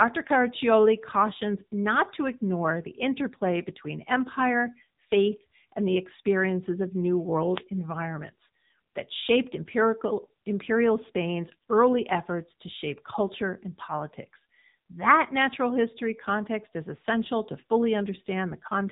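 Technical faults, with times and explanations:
Throughout: AMR narrowband mobile codec. Nothing passes above 3.8 kHz, and the buzzy, synthetic speech points to a low bitrate near 8 kbps, unlike a plain low-pass filter.
7.51 to 7.64 s: wireless microphone noise hit. A fading radio signal lets receiver noise swell into a brief burst of static, a hiss rather than a digital dropout's silence.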